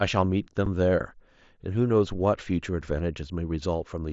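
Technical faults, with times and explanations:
0.66 s and 2.82 s, unconcealed Bluetooth headset packet loss: a 7.5 ms hole in the speech with hard edges, each fitting a single lost packet between headset and phone filled with silence or an idle pattern. The abrupt full-band gap sets it apart from concealed loss or the mSBC codec's upper bands flickering.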